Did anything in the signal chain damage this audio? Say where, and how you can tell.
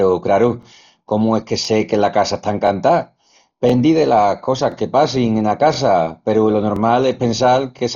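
Yes, at two stages. At the codec stage, the whole clip of speech is band-limited with nothing above 7 kHz, and it has a dull, rough quality with fluttering noise around voiced tones. This likely comes from heavy Dolby Digital compression at a bitrate around 32 kbps. At that rate the encoder narrows the band and leaves many frequency lines without mantissa bits. The decoder fills those lines with dither noise, which produces the grainy flutter.

At the buffer or processing stage, overlapping chunks cause a short stutter once every second. Each chunk begins before the previous one has finished, so about 23 ms of audio plays twice at every join. The stutters fall at 0.63, 1.65, 2.67, 3.70, 4.72, 5.74, 6.76 and 7.79 s. The one at 1.65 s comes right after "craru comu es que". The one at 3.70 s comes just before "delas cosas que passin". The one at 6.76 s follows "peru lo". Because they are spaced evenly, about 1.02 s apart, they point to 1-second processing chunks.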